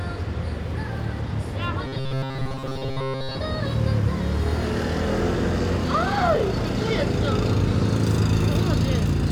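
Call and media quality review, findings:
Robotic sound from repeated short buffers, 1.86–3.37 s: rigid 133 Hz buzz. Likely buffer underrun, most audio replaced by repeats of a segment of about 7.5 ms.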